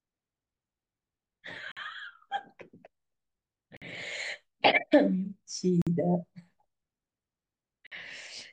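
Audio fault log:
1.72–1.77, 3.77–3.82, 5.82–5.87, 7.87–7.92 s: gap between chunks. The speech arrived in 2-second blocks, and about 50 ms of silence was inserted at each join. No speech is lost, but it breaks off into short holes at a steady rhythm.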